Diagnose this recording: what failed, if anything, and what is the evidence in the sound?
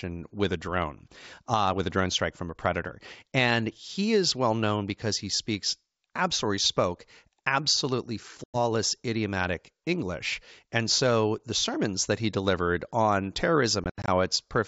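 Packet loss on the ADPCM call, network stage: silent holes at 8.44 s after "speaks absolutely spoke absolutely" and 13.84–14.09 s after "that he delivered on", after which the decoder's predictor resyncs.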